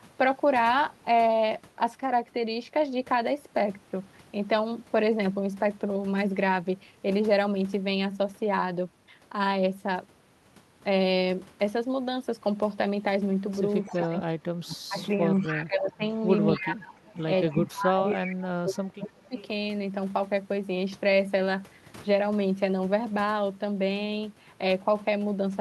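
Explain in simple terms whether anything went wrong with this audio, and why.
Two related problems show up in the middle of this speech clip, both typical of a call where one end is on a speakerphone.

First, speech suppressed in double talk, from 13.82 to 16.02 s and again from 16.56 to 19.36 s. The voice keeps sinking, sometimes nearly vanishing, in choppy pieces, for about one and a half seconds of the first stretch and about two seconds of the second. The likely cause is the echo canceller getting confused when both people talked at once and turning everything down to be safe.

Second, an echo leak: a faint delayed copy of the voice trailing 264 ms behind. It turns up from 13.83 to 15.52 s, in a tiny blip at 16.54 to 16.59 s, from 17.13 to 18.18 s, and in another blip at 19.38 to 19.45 s. This is likely a loudspeaker's sound reaching the microphone at the far end and not getting fully cancelled, so part of it gets sent back down the line.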